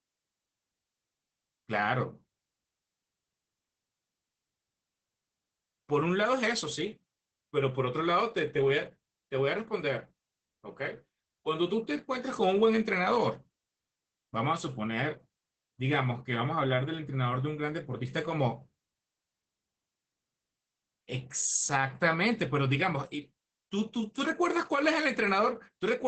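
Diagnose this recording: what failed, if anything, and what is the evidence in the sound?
The failure is at the codec stage: Opus voice compression runs through the whole speech clip. Nothing reaches above about 8.6 kHz, so the top end is cut off cleanly and the voice sounds muffled. The damage is plainly audible as a hoarse, slightly robotic grain, because the excitation is coded coarsely. That sound points to Opus in its SILK linear-prediction mode at wideband, running at a low bitrate around 12 kbps.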